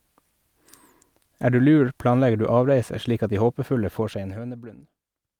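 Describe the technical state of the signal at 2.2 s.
At 2.2 s the speech signal is intact, with no audible technical fault at that moment.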